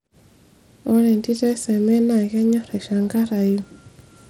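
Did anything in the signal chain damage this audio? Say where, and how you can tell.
Yes, at the codec stage, throughout: treble flickers and drops out under gritty noise, likely Bluetooth SBC compression starving upper sub-bands of bits, fitting roughly 96 kbps.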